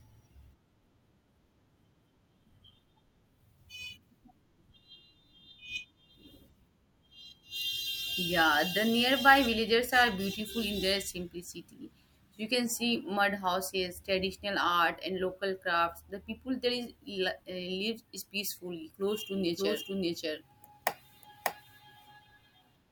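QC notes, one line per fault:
19.36 s to end, doubled audio track: from here the speech is running twice at once, a second full-band copy trailing the original by about half a second and at roughly the same level. It cuts in abruptly, with no reverb tail or room colour, and carries on until the clip ends, so it's not an acoustic echo. Most likely a second capture through a slower path, or two out-of-step copies left stacked in an edit.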